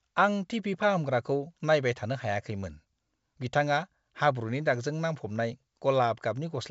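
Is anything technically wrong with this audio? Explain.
No, nothing is technically wrong.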